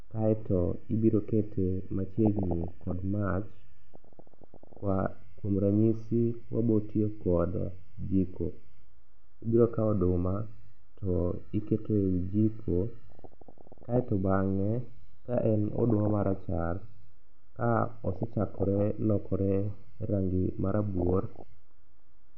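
Throughout, the speech has likely been squeezed through MP2 coding at a low rate, so upper sub-bands drop out and the rest is coarsely quantised: dull, gurgling and granular. DAB burbling follows, as bit errors of roughly 0.4 to 0.7 percent slip past error correction and corrupt single sub-bands, adding short blips of noise from 2.26 to 2.92 s, 3.95 to 4.80 s, 13.12 to 14.04 s, 15.76 to 16.36 s, 17.86 to 18.84 s, and 20.98 to 21.43 s.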